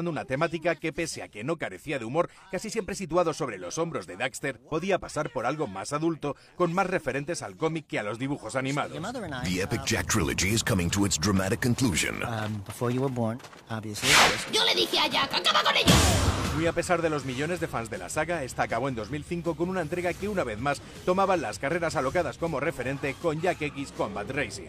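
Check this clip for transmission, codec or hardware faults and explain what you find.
No transmission, codec or hardware faults are audible here.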